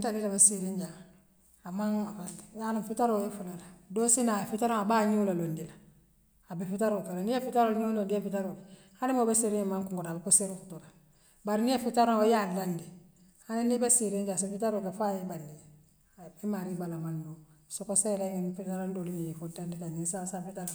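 Nothing stood out on listening to the speech recording.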